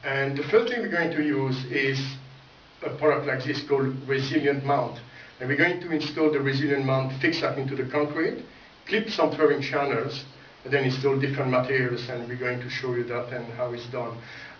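Aliasing runs the whole way through: content above 5.5 kHz folds back as gritty, metallic tones roughly 20 dB down, which fits an unfiltered drop to 11 kHz.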